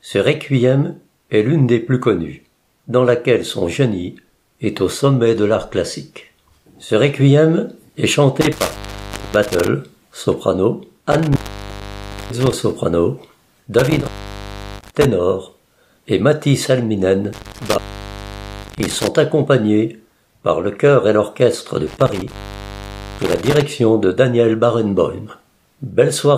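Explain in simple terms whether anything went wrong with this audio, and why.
Intermittent contact occurs five times, around 8.41 to 9.68, 11.12 to 12.53, 13.79 to 15.05, 17.33 to 19.08 and 21.87 to 23.62 s. A loose plug or cable briefly loses its connection, so the sound crackles and drops out for roughly half a second to one second each time.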